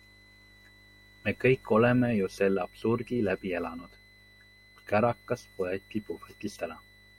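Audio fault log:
throughout, switching supply whistle: a switching power supply near the recording chain is running in an audible burst mode or beating with another supply, and its switching energy leaks into the signal path as a thin, steady whistle at roughly 2 kHz sitting about 30 dB below the speech. The pitch wanders slightly, between about 1.99 and 2.02 kHz, as the supply's load shifts, so the tone seems to waver faintly under the voice.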